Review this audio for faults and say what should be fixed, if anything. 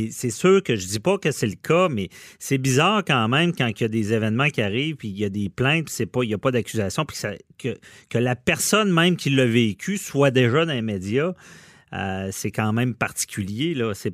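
Nothing to fix: no faults are audible anywhere in the speech.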